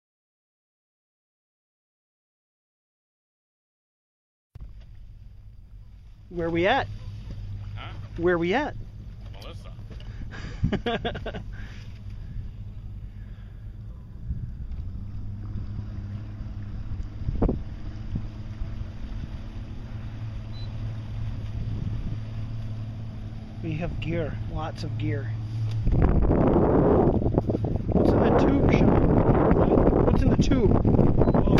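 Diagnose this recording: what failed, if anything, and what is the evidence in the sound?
Nothing stood out on listening; no stage of the chain gives itself away in the sound.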